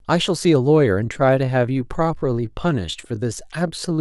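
Time-stretched section from 1.01 s to the end of this speech clip: the pace abruptly drops to about 0.725 times normal with pitch unchanged, so the speech drags, likely from software repeating short pieces to lengthen the audio.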